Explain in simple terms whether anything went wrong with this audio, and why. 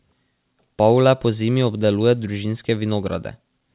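Nothing went wrong; it sounds like a normal phone call.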